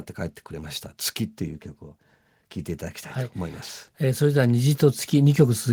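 From 3.34 s to the end, automatic gain rising: the gain control judged the input too quiet and kept raising its gain, so speech and background swell together.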